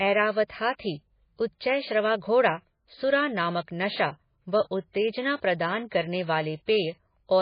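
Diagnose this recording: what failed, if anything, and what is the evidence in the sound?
The speech sounds dull and watery throughout, with nothing above 5 kHz and a swirling, unstable texture. This points to a codec stage, likely MP3 compression at a very low rate around 19 kbps. The encoder drops the treble and lets weak frequency lines flicker between frames.

Between 5.36 and 5.42 s, after "नामक नशा व उत्तेजना" and before "प्रदान करने", a short hiss of about 58 ms runs ahead of an onset, which sounds smeared. This is pre-echo from the same codec stage: quantisation noise from the loud attack spreads across the whole transform block, into the quiet moment before it.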